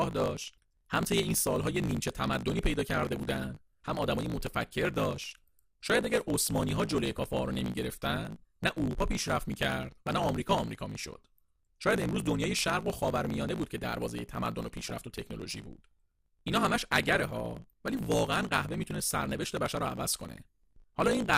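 From the start, a block size mismatch (truncated) discards the tail of each block, fitting 1024-sample writes. The result is a steady 54.4 Hz buzz and speech running 1.16 times fast. DAB burbling from bit errors of a fraction of a percent reaches the MP2 sub-bands as short blips of noise at 2.92–3.17 s, 6.28–7.18 s, 10.16–10.32 s, 14.60–14.93 s, 17.05–17.38 s and 19.66–20.16 s.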